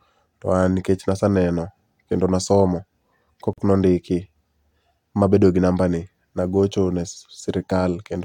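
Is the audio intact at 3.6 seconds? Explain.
No. A gap at a join of encoded pieces runs from 3.53 to 3.58 s, just before that moment. The speech drops into a gap of about 45 ms with smeared edges, then resumes where it stopped. Separately encoded pieces were joined without trimming their start delay and end padding.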